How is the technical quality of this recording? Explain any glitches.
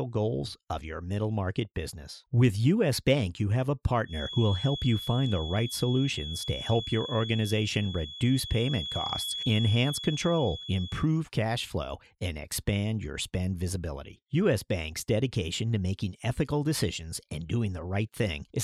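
The recording has one clear fault. From 4.03 to 11.10 s, between "you have a" and "cash flow and expand", a thin steady whistle near 3.4 kHz sits roughly 10 dB below the speech, swelling and fading slowly: a feedback whistle, likely from a loudspeaker-to-microphone loop held just at the edge of feedback.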